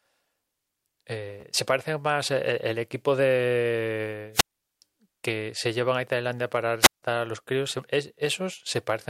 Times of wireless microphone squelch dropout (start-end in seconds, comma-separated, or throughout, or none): 4.33-4.63, 6.81-7.03